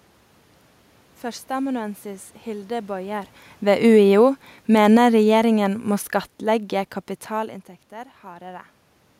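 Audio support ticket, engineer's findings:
Speech level sinks steadily 3.56 to 5.83 s, ending about 7 dB lower; room noise sinks with it, ruling out the talker. Automatic gain falling: AGC judged input too loud or its noise too strong, pulled gain down gradually. Talker shifts near 3 s and 7 s change voice level only, background unchanged.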